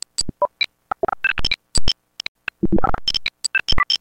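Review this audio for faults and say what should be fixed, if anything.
At 2.28 s the sound snaps to silence through a very fast fade of about 3 ms and comes back at 2.36 s. The gap is a digital broadcast dropout. The receiver stopped getting usable frames, either because the signal fell away or because frames failed their checksum, and it muted until clean frames arrived again. Roughly 64 ms of programme is missing, which fits about two lost frames, and nothing can recover it from this copy. A stronger, more stable reception path with better antenna placement or more signal margin, or a source with error protection or retransmission, would prevent these holes.

Between 2.79 and 2.89 s, two sharp loud pops land on top of the sound, roughly 10 dB above it, while the sound itself carries on underneath. This is the signature of a sudden voltage step or spike entering the chain, likely from a connector being plugged in, a switch, a static discharge or a driver glitch, with the circuits after it shaping each spike into an audible pop. 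The pops can be repaired with a click-removal tool, and keeping connections and switching untouched during capture, along with good grounding, would prevent them.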